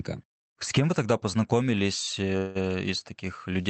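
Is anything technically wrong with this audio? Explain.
Yes. A call audio freeze runs from 2.37 to 2.57 s. Delayed packets likely emptied the jitter buffer, so about 178 ms of fading buzz or hiss fills the gap, nothing is lost, and the speech resumes late.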